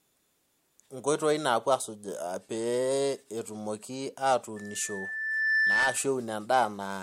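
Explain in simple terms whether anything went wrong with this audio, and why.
Yes, there's loudspeaker feedback squeal from 4.56 to 6.12 s: the microphone caught its own loudspeaker, and a 1.8 kHz tone swelled over about a second.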